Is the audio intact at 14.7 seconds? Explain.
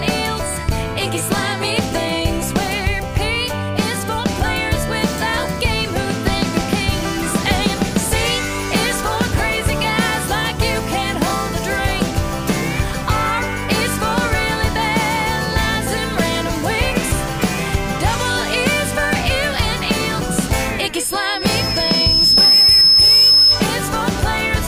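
Yes, the audio is intact at 14.7 s, with no dropout, click, distortion or other fault audible at that moment.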